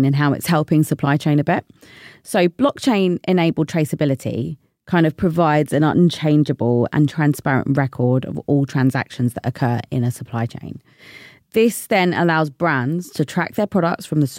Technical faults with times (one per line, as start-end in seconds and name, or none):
9.63-11.28 sample clock jitter